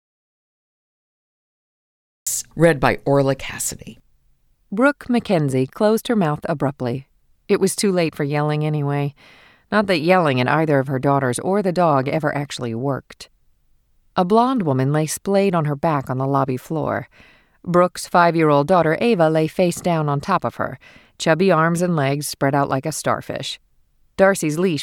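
Speech recording that opens with an audio dropout to silence: from 0.00 to 2.26 s the track is silent with no room tone, likely from input lost before the clip begins, and the sound enters abruptly mid-flow at "read by".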